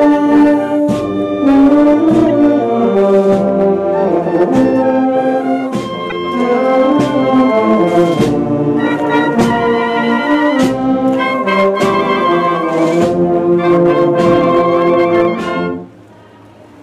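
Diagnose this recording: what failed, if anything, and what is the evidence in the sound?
Hard clipping runs through the whole recording. The gain into the converter or format stage is pushed about 4 dB past full scale, so a small share of samples, roughly 2 percent, get their peaks sliced flat. You hear that as crackly, slightly fuzzy edges on every loud moment.

There's also a corrupt frame decoded at 6.10 to 6.12 s, a short chirpy burst peaking fairly loud, around -5 dBFS. Damaged bits in what sounds like a couple of codec frames got decoded anyway, dumping energy at wrong frequencies for just that instant.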